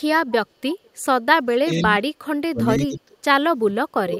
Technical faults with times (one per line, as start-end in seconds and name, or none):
0.73-0.90 echo leak
1.61-1.83 speech suppressed in double talk
2.50-3.17 speech suppressed in double talk
3.74-4.19 speech suppressed in double talk